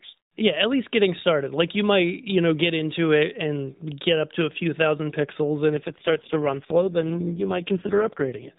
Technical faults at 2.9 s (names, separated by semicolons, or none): none